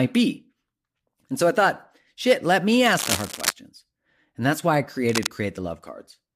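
From 2.86 to 3.52 s, and again from 5.09 to 5.27 s, dense, irregular bursts of crackling and rustling sit over the speech only slightly below its level. This is cable scratch noise, likely from a worn cable, plug or control being moved while in use. Its contact resistance fluctuates rapidly, so the signal picks up uneven noise that lasts only as long as the movement. The first event runs for about two thirds of a second, and the second is a brief flick.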